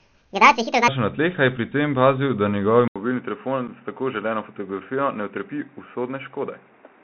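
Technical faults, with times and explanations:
Throughout: Bluetooth CVSD headset codec. The sound passes through a narrowband one-bit delta coder that fits a 64 kbps headset link, with nothing above 4 kHz. Sibilants turn scratchy and a granular hiss sits under the speech. Unlike a simple low-pass, loud high-frequency sounds outrun the adaptive step and distort.
0.00 to 0.88 s: section at the wrong speed. The opening runs 1.75 times too fast, so pitch rises by roughly ten semitones along with the tempo. It likely came from playback against the wrong clock. Normal speed returns just before "na tleh a je". A pitch shifter alone would leave the timing unchanged.
2.88 to 7.03 s: input switched to a poorer device. An 80 ms silence comes first. After it the band narrows, and new background noise sits about 35 dB below the speech. The loudness stays about the same, so the change is in tone and noise, not level. 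A change of device is the likely cause.
3.68 s: unconcealed Bluetooth headset packet loss. A 7.5 ms hole with abrupt edges drops out of the speech, which fits a single lost packet. Nothing fills the gap. A dropout from the device switch would last longer and come with a change of tone.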